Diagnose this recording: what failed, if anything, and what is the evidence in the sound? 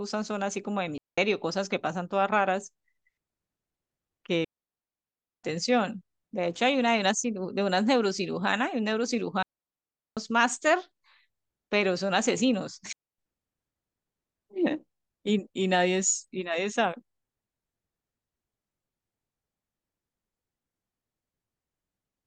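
What failed is the radio link: a digital wireless dropout, repeated four times. The speech cuts to near silence at 0.98–1.18 s (about 0.2 s), 4.44–5.44 s (a full second), 9.43–10.17 s (0.74 s) and 12.93–13.18 s (0.26 s). Each hole is clean, with a very quick fade and no noise burst on either side. That's the receiver losing too much of the data stream and muting itself rather than playing garbage.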